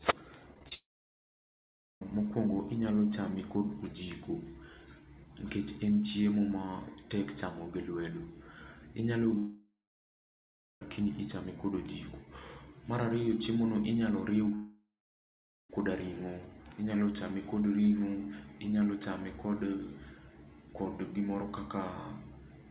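Right at the start, from 0.54 to 0.72 s, there's repeated packet loss (robotic sound): four short holes, the longest 25 ms, each patched by stretching the previous sound. About a third of that stretch is filled in, so it comes out choppy.

Straight after, from 0.74 to 2.02 s, a long network dropout is the likely cause of what you hear. The last sound smears on briefly, then about 1.2 s of silence follows before the audio resumes with that part missing. The same thing recurs at 9.38 to 10.82 s, with about 1.1 s of silence, and at 14.55 to 15.70 s, with about 0.84 s. Throughout, nothing comes through above 4 kHz, which fits a narrowband G.711 call path.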